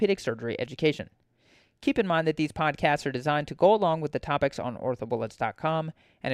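A short speech recording, with no technical faults to report. Nothing in it calls for a time or a cause.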